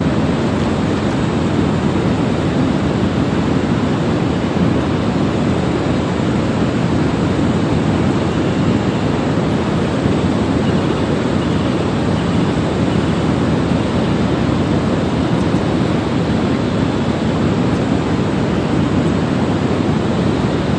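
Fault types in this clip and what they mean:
No faults turn up anywhere in this recording of sounds, so there's nothing to list here.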